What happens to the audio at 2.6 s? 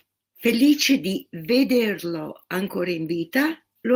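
At 2.6 s the speech carries on intact, with no dropout, click, distortion or other fault at that moment.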